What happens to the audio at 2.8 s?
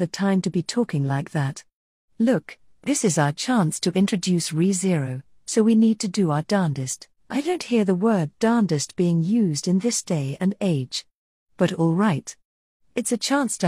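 Nothing goes wrong at 2.8 s; the audio carries on intact through that moment with no audible fault.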